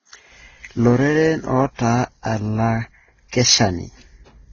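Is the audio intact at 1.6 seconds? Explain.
No. At 1.6 seconds the speech carries the same fault heard across the whole clip, likely transcoding between lossy codecs, with a low-bitrate Vorbis-style encode re-encoded through Opus. Nothing is present above 6.9 kHz, so sibilants sound dull. The second encoder spent its limited bits re-coding the first one's artefacts and added its own, so two kinds of coding grit layer together over the speech.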